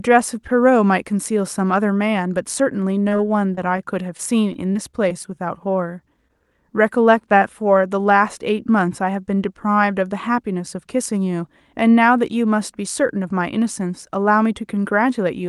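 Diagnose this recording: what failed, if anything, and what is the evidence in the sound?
Network stage, repeated packet loss (robotic sound) at 3.03–3.80 s and 4.17–5.36 s: roughly 20 ms holes patched by extending prior sound, showing as smeared, repeated spectrogram slices.

Network stage, short concealed packet loss at 6.28–6.31 s: one brief hole filled by continuation, seen as a blurred patch with a soft waveform seam.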